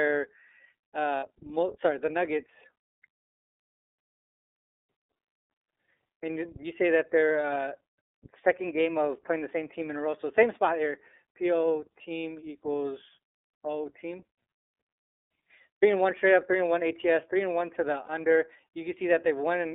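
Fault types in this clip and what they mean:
iLBC codec: A narrowband VoIP codec that codes each frame's excitation independently of the previous frame. Throughout this speech the band is held to roughly 300 Hz to 3.6 kHz, so the voice is thin and missing its upper air. The plainly audible rough, slightly synthetic texture fits the 13.33 kbps mode with 30 ms frames.
lost iLBC frames: Where packets fail to arrive, the decoder conceals the hole by repeating the last pitch cycle blended with noise. This happens twice. From 1.17 to 1.24 s a 60 ms stretch, which fits two frames, turns into a held, faintly buzzy vowel. At 18.05 to 18.09 s, just after "and one to the", a shorter 30 ms patch, fitting a single frame, does the same. In both cases the voice snaps back immediately.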